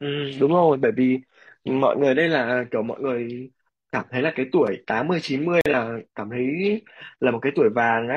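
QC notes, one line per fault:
5.61–5.66 s, gap between stream segments: a hard-edged 45 ms hole cuts the speech where two segments' timestamps fail to meet and the player fills the space with silence. No audio is lost. The waveform shows a flat line with abrupt edges, and the spectrogram a clean vertical blank strip.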